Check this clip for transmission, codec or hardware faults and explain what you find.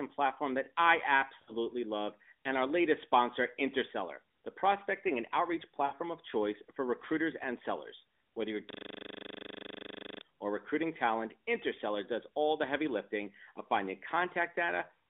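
Three faults stand out: two short dropouts and one stretch of frozen, looping audio. All of it passes through a narrowband mobile line, with sound held to roughly 250 Hz to 3.6 kHz and only light codec roughness, consistent with AMR narrowband at its top 12.2 kbps mode.

Lost AMR speech frames, 1.42 to 1.52 s and 5.86 to 5.95 s: each time the speech briefly smears into a held, fading warble before recovering slightly rough. The decoder discarded corrupted frames and stretched the last good pitch and vocal-tract settings with falling gain. Each gap is about 60 ms, which fits three 20 ms frames.

System hang loop, 8.70 to 10.21 s: a rapid, mechanical buzzing stutter replaces the speech. One 40 ms slice repeats exactly, some 38 times, at 25 Hz, because the computer or driver froze while the sound hardware kept replaying the same ring buffer.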